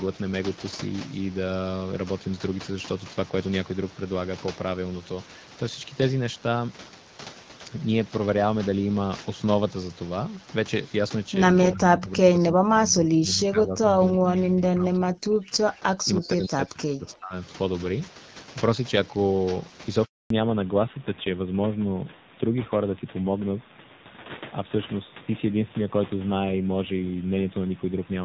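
A speech recording carried over a wideband call, with three faults. From 11.72 to 17.35 s the voice repeatedly dips, by as much as about 40 dB, and breaks up for around five seconds in total. This is likely speech suppressed in double talk: an echo canceller unable to tell the near talker from loudspeaker echo turns both down. At 20.04 s the voice dies away and stays silent for 260 ms until 20.30 s, a handover gap where no speech frames arrived while the call switched networks. From 20.30 s to the end, nothing remains above 4 kHz and the voice is duller and rougher, a fallback to narrowband. The earlier part sounds consistent with AMR-WB at about 12.65 kbit/s, and the new band limit fits AMR-NB at a low rate such as 7.4 kbit/s.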